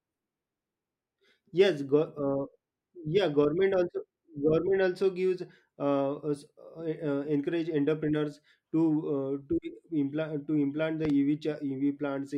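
A speech recording in which a loud pop, a sharp double thump roughly 10 dB above the speech, lands at 11.05–11.12 s, likely from a voltage pulse such as a plug, switch or static discharge.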